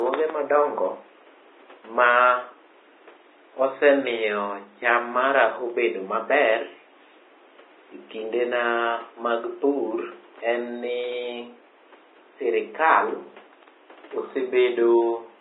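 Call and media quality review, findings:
Vorbis compression, whole clip, 0 to 15 s: heavy codec damage in speech, likely from a low-rate Vorbis encode, with the sound pointing to roughly 20 kbps. Encoder lowered cut-off and coarsely quantised residue above smooth floor. Treble detail replaced by hiss-like noise of similar energy. Grainy, roughened tone, smeared consonant attacks. Room noise, about 29 dB below speech, sits underneath.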